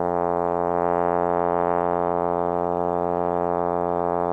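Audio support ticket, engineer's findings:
No fault found in the music clip on listening. Nothing audible points to a failing component or path, so no action is needed.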